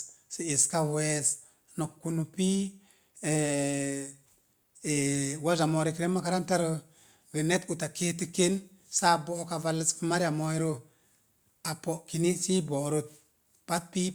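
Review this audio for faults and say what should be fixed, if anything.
Nothing needs fixing: the speech signal holds steady throughout, with no audible technical defects.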